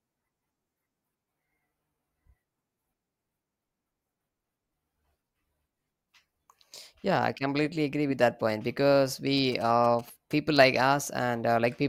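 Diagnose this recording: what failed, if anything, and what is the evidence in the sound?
Network/segment stage: at 7.93 s, right after "I completely", an overlap between stream segments makes a tiny skip. Overlapping timestamps trimmed real audio, fitting 2-second segments. Unlike a dropout, there is no silent gap.

Analogue wiring: from 9.37 to 10.33 s, after "with that point because", GSM signalling bursts rectified by the circuitry add a galloping dit-dit-dit of 217 Hz buzzes, roughly 25 dB down. Unlike steady mains hum, they come in gated bursts.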